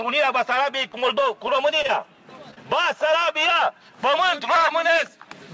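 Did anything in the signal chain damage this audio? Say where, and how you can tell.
Yes. In the network stage, scattered short gaps between 0.56 and 1.90 s produce about five brief ticks and smears, the longest about 30 ms, where the receiver extrapolated the preceding sound.

A single short concealed packet loss at 2.54 to 2.58 s leaves a brief smear. About 20 ms never arrived, and the receiver continued the last sound before blending back.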